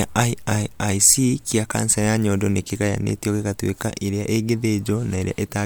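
Listening to this speech recording, nothing technically wrong stood out.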